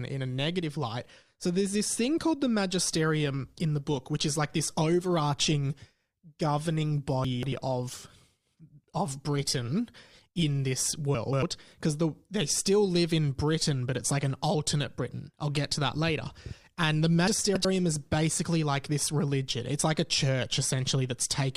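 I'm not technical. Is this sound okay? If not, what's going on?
No. From 2.86 to 10.86 s the speech plays from an adaptive stream at a lower bitrate: the connection slowed, so a cheaper version was sent. It suddenly sounds rougher, with more coding artefacts. Unlike a dropout, it never goes silent, and the sound quality simply recovers at 10.86 s.

There are also chunks out of order at 7.25 to 7.52 s, 11.15 to 11.42 s and 17.28 to 17.65 s. Pieces about a tenth of a second long play two or three places late, so the sound jumbles briefly. Unlike a skip, nothing is missing.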